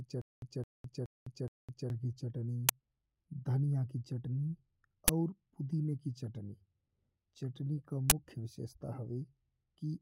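Speech recording with two faults. From the very start until 1.90 s there is a stutter with silent gaps: a 215 ms fragment repeats four times, each followed by about 207 ms of digital silence, a 421 ms cycle that likely comes from a stalled stream replaying its last buffer. Three uninitialised buffer bursts follow, loud, harsh blasts of digital noise where stale memory was played as audio: at 2.69 s, lasting about 6 ms, which fits a 256-sample block; at 5.08 s, about 12 ms, between "की चटनी" and "और पुदीने की चटनी", which fits 512 samples; and from 8.10 to 8.12 s, just after "चटनी का", about 23 ms, which fits 1024 samples.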